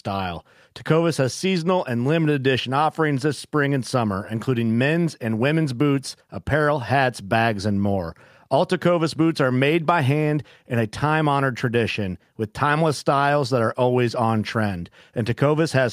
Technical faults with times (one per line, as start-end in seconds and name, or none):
none